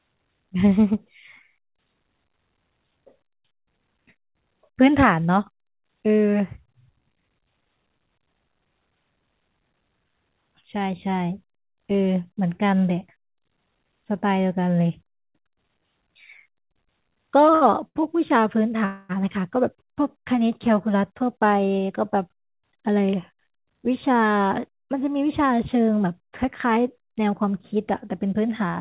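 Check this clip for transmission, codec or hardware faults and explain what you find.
Yes, there are transmission faults: two short stalls, a freeze, and two stretches of jitter buffer speed-up, all heard through a narrowband call path with nothing above 4 kHz, which fits G.711 A-law.

Short stall from a late packet, 17.54 to 17.64 s and 17.88 to 17.98 s: a packet missed its playout time and the jitter buffer ran dry, so the receiver held the last sound for about 70 ms each time. Nothing is lost, but the sound briefly drags with a slight buzz or dip.

Call audio freeze, 18.85 to 19.12 s: the jitter buffer emptied, likely because packets were held up in transit, and about 240 ms was filled by continuing the last sound. That gives a fading buzz or hiss with no full silence before the speech resumes where it stopped.

Jitter buffer speed-up, 20.93 to 23.33 s at 108% and 27.06 to 28.61 s at 107%: the buffer held more audio than it aims for, so the receiver repeatedly cut out short pitch-period chunks, removing roughly a fifth and a tenth of a second. 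The speech sounds hurried but keeps its pitch.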